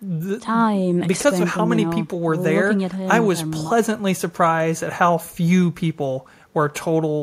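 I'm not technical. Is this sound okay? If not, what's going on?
Yes, there's nothing wrong here, so you can relax about this one.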